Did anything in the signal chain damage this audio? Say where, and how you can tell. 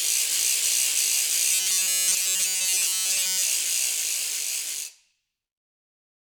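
Yes. From 1.52 to 3.43 s, robotic sound from repeated short buffers imposes a fixed 188 Hz buzz, likely a starved driver buffer looping 5.3 ms chunks, pitched rather than silent like dropouts.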